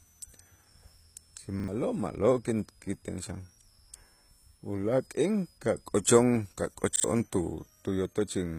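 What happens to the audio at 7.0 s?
From 6.96 to 7.04 s, a repeated buffer causes a short stutter. A 40 ms chunk plays two extra times with hard joins, and roughly 70 ms of new audio is lost. A switching supply whistle also runs through this moment. It is a thin, high tone at about 5 kHz, wandering between 5.1 and 6.2 kHz, at about 35 dB below the speech. The treble sounds gritty and lispy, with nothing above 14.9 kHz. Likely cause: HE-AAC compression at a low bitrate near 20 kbps, which rebuilds the top band from copied lower bands.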